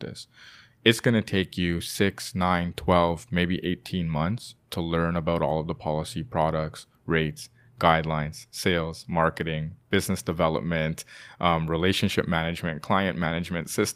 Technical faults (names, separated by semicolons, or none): none